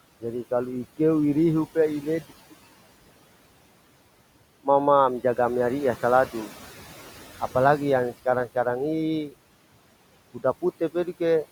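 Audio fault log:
Throughout: noise suppressor artifacts. The room noise, sitting about 19 dB under the speech, is pulled down by about 17 dB between phrases and rises under them.
2.30 to 7.18 s: input switched to a poorer device, likely. A 200 ms silence, then audio dulls, level unchanged, and a faint new noise floor.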